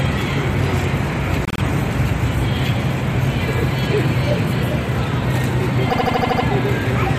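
Repeated frames at 1.45–1.61 s and 5.89–6.44 s: a 52 ms block replays three extra times, then a 78 ms block seven times, stuttering. A spectrogram shows identical tiled slices.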